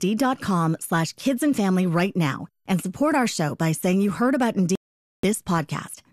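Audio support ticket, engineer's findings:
Sound mutes abruptly 4.75–5.24 s, 480 ms missing, then resumes. Digital broadcast dropout: receiver muted on lost or corrupt frames, consistent with about 20 dropped frames.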